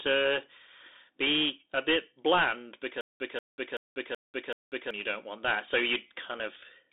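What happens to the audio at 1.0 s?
At 1.0 s the speech carries the Bluetooth CVSD headset codec, as it does for the whole clip. The band runs about 250 Hz to 3.7 kHz, with nothing above 3.8 kHz. Each sample is a single up-or-down bit, which fits a 64 kbps CVSD stream. The adaptive step cannot keep up, so the damage is plainly audible: scratchy s sounds and a granular hiss.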